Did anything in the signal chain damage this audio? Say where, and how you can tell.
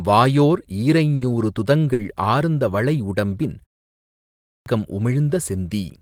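Yes. The network stage shows a burst of packet loss twice, at 1.15 to 1.24 s and 1.93 to 2.02 s. In each, the last sound is held and fades for 60 ms, like a buzz or hiss. Then speech resumes with 60 ms missing. Consecutive packets arrived too late or never arrived.

Playback shows a clipped start after a pause. After a 0.45 s silence, speech begins abruptly at 4.66 s. The onset from 4.03 s is gone, about 630 ms. The output device slept during the pause and woke too slowly to play the beginning.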